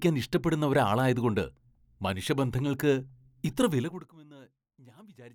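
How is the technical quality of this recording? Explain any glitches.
One glitch stands out, a burst of zipper noise during a level drop late in the speech.

From 3.76 to 4.14 s, a fade of roughly 25 dB is applied in discrete steps of about 1 dB each, around fifty times a second, with no smoothing between them. Each jump in gain leaves a tiny discontinuity in the waveform, so for those 0.38 s a rapid ticking, zipping texture rides on the speech as it sinks in level.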